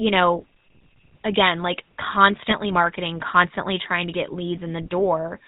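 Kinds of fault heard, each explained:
GSM full-rate codec: The speech passes through a 13 kbps vocal-tract model driven by sparse pulses. Throughout, it sounds plainly buzzy and gravelly, with nothing above 4 kHz.
GSM bit errors: Corrupted decoder parameters distort one short stretch. From 2.5 to 2.55 s the speech breaks into a brief squawk, which fits a couple of damaged frames.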